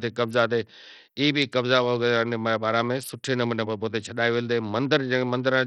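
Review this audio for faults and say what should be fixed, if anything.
The speech sounds dull and gritty throughout, with treble flickering in and out and rough aliasing riding on it. This is likely heavy Bluetooth SBC compression: starved bits leave the top sub-bands empty and coarsely quantise the rest, consistent with about 64 kbps. Record over a wired link or a higher-quality codec to prevent it.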